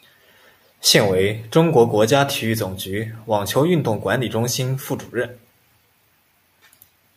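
A speech recording with no technical faults to report. Nothing in the audio points to a problem anywhere in the recording or playback chain.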